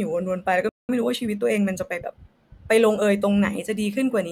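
At 0.69 s the speech just stops dead and the line sits silent for about 200 ms, until 0.89 s. That's a playback stall: the player most likely ran dry of buffered data, or its output thread got held up, so nothing reached the output for that stretch. It isn't a fade or a dropout of level. The flow is simply cut mid-stream and left hanging for a noticeable beat before the audio comes back.

Right after it resumes at 0.89 s you get time-compressed catch-up, running until 2.19 s. The player is working off the backlog it built up during the gap by snipping out tiny slices and cross-fading over the joins, which lands at roughly 1.15 times normal speed. Pitch stays put, so the speech doesn't go chipmunky. It just sounds a bit rushed across that 1.3-second stretch.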